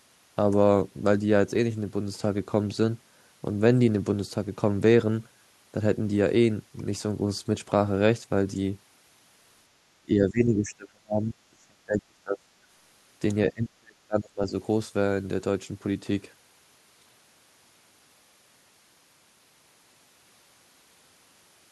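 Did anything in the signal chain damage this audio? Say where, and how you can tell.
Yes, damage in the call processing stage, likely an echo canceller that mistook simultaneous talk at both ends for loudspeaker echo and turned everything down at once, which is speech suppressed in double talk. The speech sinks sharply from 9.87 to 12.51 s, dropping by roughly 30 dB for about two seconds in total. It sinks again from 13.51 to 14.53 s, this time by around 35 dB for about a second.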